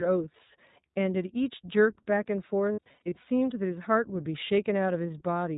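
The speech runs through the iLBC codec from start to finish. It is coded in independent 20 ms frames, with the excitation of each frame rebuilt without reference to the previous one, and the plainly audible codec damage fits iLBC's 15.2 kbps mode. The narrowband path removes everything above 4 kHz, so the speech is dull and boxy, and the coarse excitation coding gives it a rough, slightly synthetic edge.

Between 2.72 and 3.25 s, lost iLBC frames leave holes that the decoder fills by repeating the last pitch cycle blended with noise. The losses are scattered over about 520 ms and total 240 ms, which points to roughly a dozen dropped 20 ms frames, with runs of up to about 70 ms. Each gap sounds like a briefly held, buzzy, breathy vowel. Because every iLBC frame decodes on its own, the speech snaps back to normal as soon as a good frame arrives.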